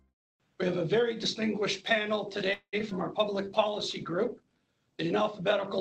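At 2.53 s the audio stalls for about 0.21 s, until 2.75 s. The likely cause is packets held up in transit while the jitter buffer ran dry, a call audio freeze. The receiver stretches the last sound into a buzzy tail, roughly 0.19 s of filler that fades to about 60 ms of silence. When packets resume, playback continues where it stopped, so a pause is inserted and nothing is lost, but everything afterwards runs about 194 ms late.

Shortly after, from 2.79 to 2.82 s, comes a short concealed packet loss. About 20 ms of audio never reached the decoder in time, so the receiver extrapolated from the preceding sound for roughly 9 ms and cross-faded back into the real signal. It is heard as a tiny smear or wobble rather than a clean gap.

At 2.90 to 2.93 s the playback skips ahead. With later audio already queued, a chunk of around 70 ms was discarded, either in transit or as the overfull buffer shed its backlog. 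This cuts the built-up delay by about 50 ms. The two sides of the cut are joined with only about 12 ms of smoothing, so the sound jumps abruptly forward with a fragment missing.

From 2.99 to 4.76 s a call bitrate drop sets in. The bandwidth estimate fell, and the encoder was pushed from 96 kbps down to 22 kbps, holding the lowest rate for about 1.64 s. At that rate the coding turns coarse and the audio bandwidth narrows from 20 kHz to 12 kHz. The sound becomes duller, grainier and watery until the bitrate climbs back.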